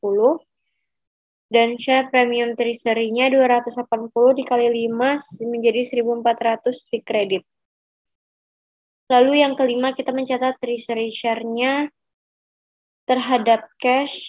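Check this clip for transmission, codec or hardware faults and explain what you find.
No faults turn up when this clip is checked.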